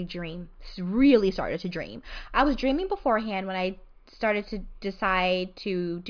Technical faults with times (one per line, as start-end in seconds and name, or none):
none